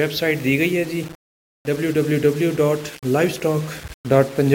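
Low bit depth without dither runs through the whole clip, from start to finish. The sound is coarse and grainy, with a rough distortion that rises and falls with the signal, and the quietest moments break up into sputter or drop out. The likely cause is the signal being rounded to around 6 bits with no dither, leaving an error that tracks the audio at roughly 20 dB below it.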